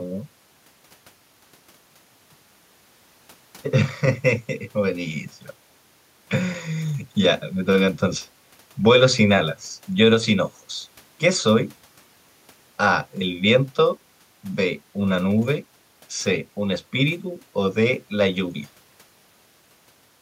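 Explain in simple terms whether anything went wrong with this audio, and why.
Nothing stood out as a problem when listening to this speech recording; no glitches or interruptions could be heard at any point.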